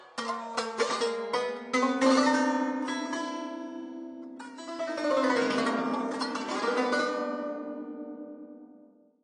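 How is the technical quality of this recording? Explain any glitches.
The technical quality is poor, with plainly audible codec damage from start to finish. The likely cause is AAC compression, specifically AAC-LC at a low bitrate, and the degree of smearing fits something around 32 kbps. With too few bits, the encoder quantises its frequency lines coarsely against its hearing model and discards everything above 9.9 kHz. The music therefore sounds dull and lacks top-end air, and its detail is smeared into a blurred, warbling texture.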